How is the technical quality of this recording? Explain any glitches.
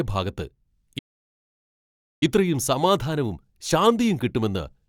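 The main problem is a playback stall that cuts the speech off. From 0.98 to 2.23 s the audio goes silent for about 1.23 s, then picks up again. The player most likely ran dry of buffered data or had its thread held up, so nothing reached the output until it recovered, leaving a dead gap in the middle of the speech.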